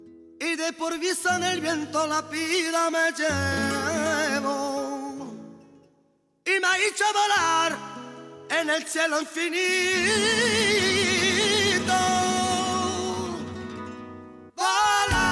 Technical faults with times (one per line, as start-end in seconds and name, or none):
none